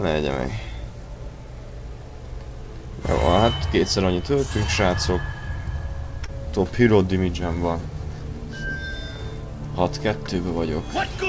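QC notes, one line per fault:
6.26–6.30 s, short concealed packet loss: about 20 ms of the call arrived too late for the decoder, so the receiver extended the preceding sound for roughly 18 ms and blended back, leaving a brief smear over band-limited audio that stops at 8 kHz, consistent with G.722.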